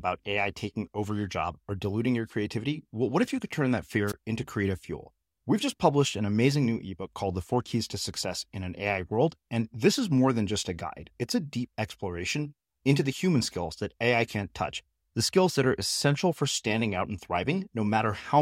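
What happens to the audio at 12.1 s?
Nothing goes wrong at 12.1 s. The speech carries on intact through that moment, with no fault to be heard.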